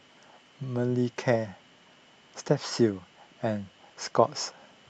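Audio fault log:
No faults can be heard in this speech clip. The audio came through a WebRTC call path, and its high end stops at about 8 kHz, which points to an Opus codec running at a limited bandwidth.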